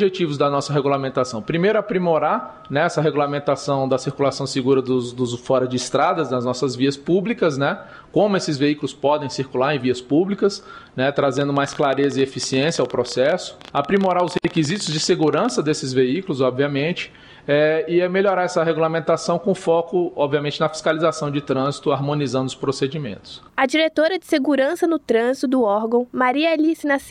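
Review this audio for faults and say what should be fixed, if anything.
From 11.37 to 15.50 s a train of clicks ticks and pops over the sound, about 15 per second at an uneven pace, some seventy in all, with peaks a few dB louder than the audio itself. The pulses share one shape, the signature of a single source repeatedly injecting a spike, likely interference from nearby equipment or a faulty connection or power supply. To prevent it, keep other electrical equipment away from the recording chain and check the interface's cabling, grounding and driver stability before recording.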